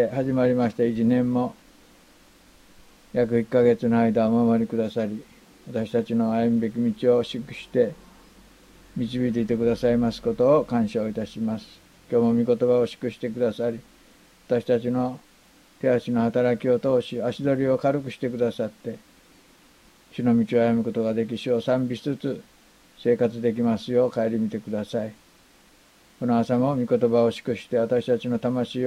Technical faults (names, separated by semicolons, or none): none